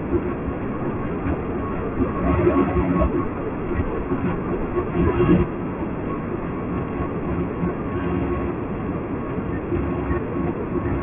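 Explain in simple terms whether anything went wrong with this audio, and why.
Aliasing runs through the whole clip. The speech was converted to a much lower sample rate, consistent with a drop to 6 kHz, without first removing sound above 3 kHz. That content folded back below 3 kHz as false tones, making hissy sounds gritty and metallic.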